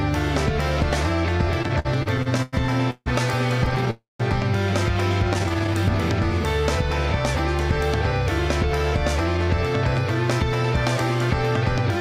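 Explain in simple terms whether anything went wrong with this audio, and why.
From 1.63 to 3.88 s the sound has repeated stalls (stutter): fourteen brief holds, the longest 153 ms, covering about a fifth of that stretch. Packets arrived late, the receiver's buffer kept running empty, and each pause was filled by stretching the last sound. A milder bout follows from 5.33 to 5.77 s, with nine very short holds of up to 12 ms.

From 3.90 to 4.21 s there is a call audio freeze. The last sound is held and fades, ending in 160 ms of silence, before the audio resumes where it stopped, 290 ms later than it should. The likely cause is packets held up in transit.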